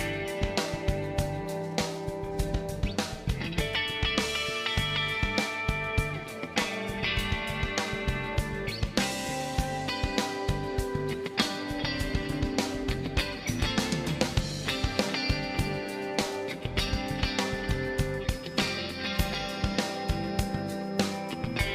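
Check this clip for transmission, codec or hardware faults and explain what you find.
One fault stands out: a feedback whistle in the last few seconds.

From 18.22 s to the end, a thin, steady tone near 5.1 kHz sits behind the sound, roughly 25 dB below it, swelling and fading slowly in level. The likely cause is an acoustic loop from a loudspeaker back into the microphone, held just at the edge of instability, so one frequency keeps ringing without building into a full howl.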